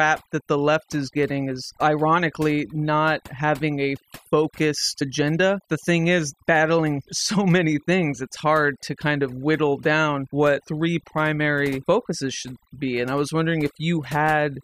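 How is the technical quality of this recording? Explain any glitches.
Throughout the clip, the background drops and breaks up into twinkling, warbling specks. That is overdone noise removal. The noise reduction was pushed too hard, so any frequency band close to its noise estimate was cut nearly to nothing, taking quieter parts of the voice along with the noise.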